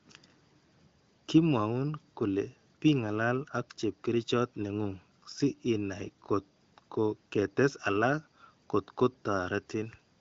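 No faults in this speech, which runs over an AMR wideband (HD Voice) codec path with nothing above about 7.2 kHz and coding that fits one of the higher-rate modes.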